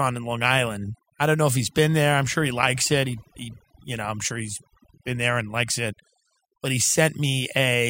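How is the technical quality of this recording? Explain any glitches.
The recording's quality is held back by one fault, overdone noise removal, present from start to finish. A noise reduction stage set too strong cuts individual frequency bands whenever they approach its noise estimate, removing quiet speech detail with them. Pauses fall to near silence with twinkling specks. Unlike codec swirl, the damage follows the noise floor, so it is worst in quiet passages.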